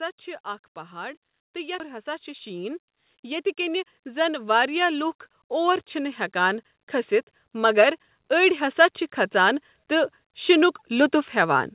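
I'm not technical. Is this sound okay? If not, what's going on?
No. Three separate problems can be heard.

The first is automatic gain rising, which happens twice: from about 0.9 to 6.8 seconds, and more gently from about 7.5 to 11.6 seconds. The call's volume control decided the speech was too quiet and slowly turned it up. The voice and the background grow louder together over several seconds. A person moving closer to the microphone would make the voice louder, but the background would stay the same.

The second is a skip ahead at 1.8 seconds. About a second of speech is simply missing, and the audio on either side is joined almost directly. There is no silence, stutter or repeated sound at the join, so it isn't a dropout or a freeze. The speech just jumps forward.

The third is a jitter buffer speed-up, from about 1.9 to 4.0 seconds, right after that jump. The receiving end was holding too much audio in reserve, so it caught up by cutting out many tiny slivers, about a fifth of a second in total. 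The speech runs roughly a tenth faster and sounds hurried, but the pitch stays the same. This is how you can tell it from a recording that is simply played too fast, which would also sound higher.

The muffled, telephone-like quality comes from the ordinary phone-call connection, not from a fault.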